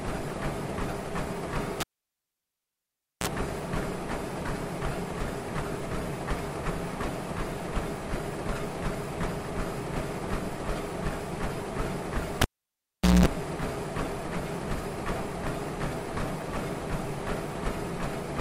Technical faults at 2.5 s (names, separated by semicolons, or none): cable pulled and plugged in